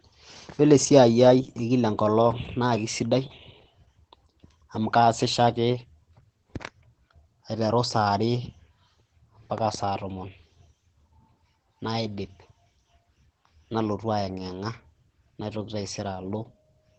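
From start to finish the speech carries Opus voice compression, with nothing above 8.6 kHz and a muffled, hoarse, faintly robotic edge. The coarse excitation coding sounds like the SILK coder squeezed to roughly 12 kbps in wideband mode, and the damage is plainly audible.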